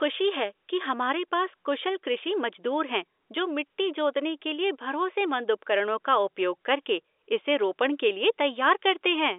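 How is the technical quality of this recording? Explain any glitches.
No glitches or technical faults turn up anywhere in the recording. The speech has the narrow, boxy sound of G.711 telephone coding, with its energy held roughly between 300 Hz and 3.6 kHz and nothing above about 3.8 kHz.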